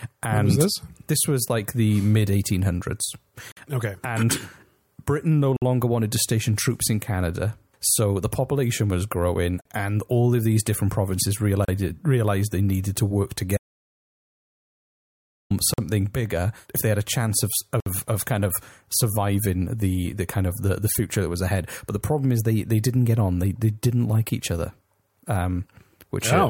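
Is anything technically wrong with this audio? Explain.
Yes, the speech is interrupted by two kinds of fault.

Gaps between stream segments: hard-edged silent holes of 34 to 60 ms occur at 3.52, 5.57, 9.61 (after "the population was growing"), 11.65 (after "of these different provinces"), 15.74 (before "bigger if they had") and 17.80 s. Their spacing fits 2-second segments whose timestamps fail to meet, so the player pads each join with silence. No speech is lost, but the flow stutters.

Audio dropout to silence: from 13.57 to 15.51 s the sound cuts to silence with no room tone, and about 1.9 s of speech is gone. The likely cause is a lost input, such as a disconnected device or failed link, while silence kept being written.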